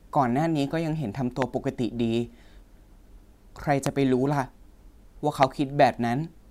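Sharp single loud pops hit at 1.42–1.44 s, 3.86–3.89 s and 5.43–5.45 s, the first about 15 dB above the speech and the later two about 20 dB, with the speech continuing underneath. Each is likely a brief voltage spike entering the signal chain.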